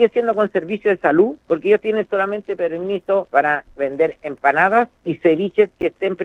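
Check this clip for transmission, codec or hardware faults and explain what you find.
One fault, chunks out of order, at 5.81 to 5.83 s: a brief garbled jumble, caused by a 10 ms chunk arriving one chunk late and swapping places.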